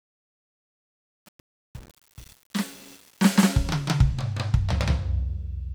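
From 0.0 to 3.45 s the music's fade carries truncation distortion: undithered 8-bit steps make the quiet end gritty, showing as a stair-stepped waveform.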